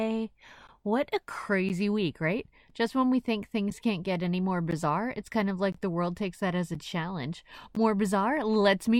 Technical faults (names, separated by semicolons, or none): gap between stream segments